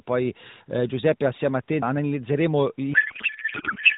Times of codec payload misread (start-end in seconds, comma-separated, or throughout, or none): 2.94-3.98